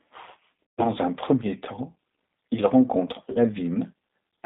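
Throughout, G.729 codec coding confines the speech to roughly 200 Hz to 3.7 kHz and adds a plainly audible rough, synthetic texture, consistent with 8 kbit/s G.729A. From 0.63 to 0.90 s, VoIP packet loss concealed by the speech codec bridges about 150 ms of missing audio, pointing to five lost packets, with a fading extrapolation before "un premier temps il". From 3.32 to 3.38 s, after "premier temps il rencontre", a shorter 30 ms concealment, likely one lost packet, briefly smears the sound.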